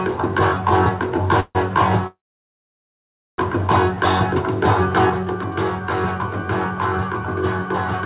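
At 1.40 s, a call audio freeze holds the sound for about 150 ms. It ends in a brief silence. From 2.07 to 3.41 s, a longer freeze fades quickly to about 1.2 s of silence, then resumes where it stopped. The likely cause is packets delayed past an empty jitter buffer. From 5.10 s to the end, one channel drops out, likely from a lost stereo side. Shared content falls abruptly by about 6 dB.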